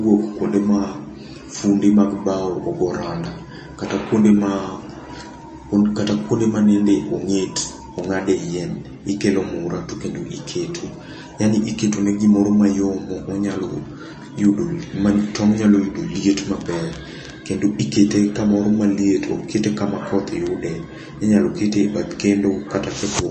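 Throughout the speech, the treble stops dead at 8.3 kHz and faint detail flickers in and out, giving a watery, swirly sound with chirpy s sounds. This plainly audible damage is likely MP3 compression at a starved bitrate, consistent with about 34 kbps. A simple low-pass filter would dull the top without the swirl.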